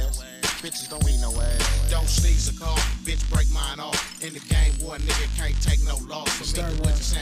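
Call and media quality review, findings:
No audible faults found in this recording.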